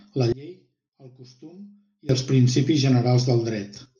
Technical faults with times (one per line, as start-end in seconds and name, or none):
0.32-2.09 one channel inverted